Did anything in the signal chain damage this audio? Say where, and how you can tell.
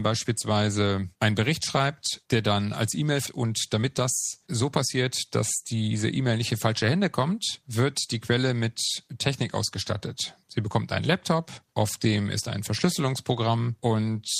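Yes. At 3.27 to 3.29 s the sound does a skip ahead. Roughly 0.7 s of material is simply absent, and the two sides are spliced almost directly, with no silence and no concealment fill. That rules out an ordinary packet-loss dropout, which leaves a gap or a smeared, synthesized bridge. This points to the network and jitter-buffer stage: a late run of audio was discarded while newer audio was already queued, so playback jumped to it.

Right after that, from 3.43 to 4.02 s and again from 4.47 to 6.31 s, the speech runs at about 106% speed and sounds hurried, yet its pitch does not rise. That unchanged pitch is what marks a jitter buffer speed-up rather than a clock or sample-rate mismatch, which would raise pitch along with tempo. The buffer was trimming itself back toward its target delay by cutting out pitch-period-sized slices, a few tens of milliseconds in the first stretch and about a tenth of a second in the second.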